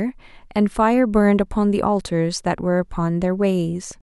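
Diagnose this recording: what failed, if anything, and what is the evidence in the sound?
Nothing failed: I can hear no fault at any stage of the signal chain in this speech recording.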